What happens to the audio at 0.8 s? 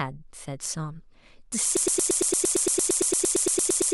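Nothing goes wrong at 0.8 s; the speech there is intact, with no audible fault.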